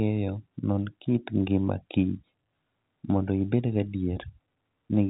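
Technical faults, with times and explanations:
No technical faults; the speech carries the expected G.711 telephone band limit, with nothing above about 3.8 kHz.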